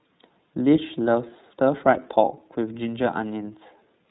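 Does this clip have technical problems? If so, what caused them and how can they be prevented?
Yes. The whole clip carries iLBC codec damage, and it is plainly audible. The speech is band-limited, with nothing above 4 kHz, so it sounds muffled and narrow. Each frame's excitation is coded on its own, without reference to the previous frame, which leaves the speech slightly rough and synthetic. The texture fits iLBC's 30 ms frame mode at about 13 kbps. To prevent it, record or transmit with a wideband codec at a higher bitrate.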